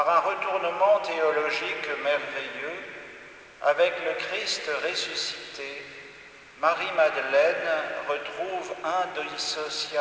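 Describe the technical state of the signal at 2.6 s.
At 2.6 s the signal is intact, with the sound passing cleanly through the WebRTC call path, whose G.722 coding leaves nothing above about 8 kHz.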